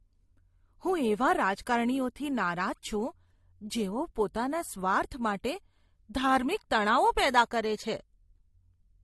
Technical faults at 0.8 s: transcoding between lossy codecs

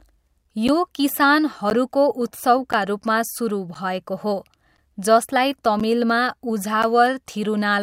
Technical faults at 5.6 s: periodic USB or driver dropouts

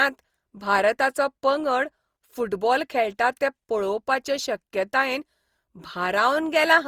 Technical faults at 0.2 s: generation loss

